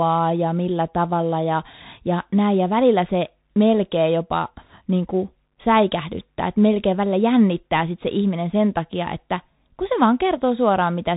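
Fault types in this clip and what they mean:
Bluetooth CVSD headset codec: the speech went through the narrowband headset link, which codes each sample as one up-or-down bit with an adapting step and fits a 64 kbps stream. Nothing above 3.8 kHz survives, and the codec damage is plainly audible throughout.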